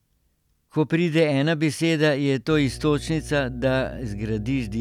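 From 2.50 s to the end, mains hum enters: a steady 60 Hz tone from power-line coupling, fairly loud beneath the speech, unwavering in pitch unlike rumble.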